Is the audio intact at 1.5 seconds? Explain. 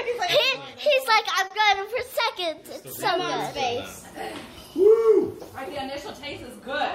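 No. From 1.47 to 1.52 s there is a short stall from a late packet: the jitter buffer ran dry, so the last sound was stretched for about 30 ms, then playback resumed exactly where it left off. Unlike a lost packet, nothing is skipped; the sound only lingers briefly with a slight buzz or dip.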